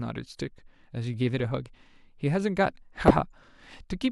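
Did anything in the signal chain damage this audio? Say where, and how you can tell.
Yes. Between 3.08 and 3.21 s the speech breaks into a short burbling patch: DAB burbling, damage at the codec stage of a broadcast reception chain. Weak reception let bit errors, roughly a fifth of a percent, slip past error correction into the MP2 data, so corrupted samples put short blips of noise into individual sub-bands frame by frame. About a dozen frames were hit. A spectrogram would show blocky, flickering horizontal bands lighting up and vanishing, and the waveform would show irregular bursts.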